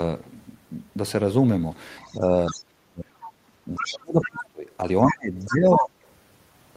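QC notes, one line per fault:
2.01–2.64 s, 3.22–3.31 s, 3.75–4.43 s, 5.06–5.83 s, other side's voice leaking through: a second voice sits under the talker, around 20 dB down at first, nearer 15 dB at 3.75 s and only about 5 dB down by 5.06 s, likely loudspeaker echo the echo canceller left in the microphone signal.
2.13–3.08 s, 3.78–4.66 s, 5.11–5.95 s, speech suppressed in double talk: the talker's level falls in pieces while the far voice plays, by about 30 dB in the first two spans and about 25 dB in the last, likely the canceller attenuating both sides during overlap, costing roughly 0.4 s, 1 s and 0.7 s of speech.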